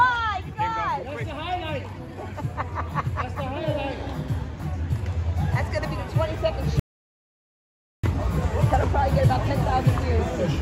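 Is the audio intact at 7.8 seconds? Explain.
No. At 7.8 s the clip sits inside an audio dropout to silence running from 6.80 to 8.04 s, about 1.24 s long. The sound cuts out mid-flow into silence with no room tone. The input was likely lost while the recorder kept writing silence.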